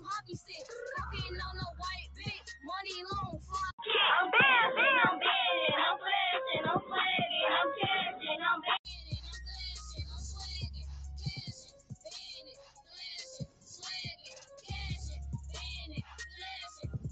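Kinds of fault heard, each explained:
Noise suppressor applied to music or sounds: A suppressor built for speech was left on, and it's mistaking steady tones and decays for noise. Across the whole clip the level swings by roughly 10 dB, so held sound pumps and thins while sharp onsets mostly get through.
Sound cut by the noise suppressor: Some moments get pushed down harder, by about 6 to 14 dB, starting at 0.0, 2.1, 3.32, 11.63, 12.4, 13.43, 14.15 and 16.02 s. Each dip lasts up to about half a second, and sustained parts sink or get their tails clipped.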